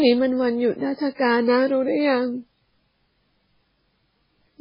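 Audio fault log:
throughout – MP3 compression: nothing above 5.3 kHz, leaving the speech dull, watery and swirly, with chirpy s sounds; likely a heavily starved MP3 encode, fitting roughly 16 kbps. A spectrogram shows a flat ceiling at 5.3 kHz and flickering holes beneath.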